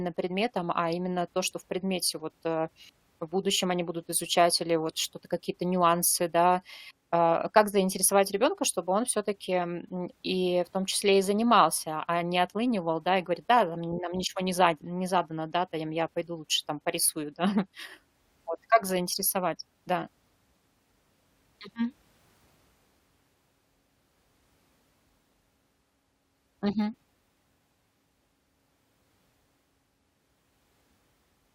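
No technical faults can be heard anywhere in the speech recording.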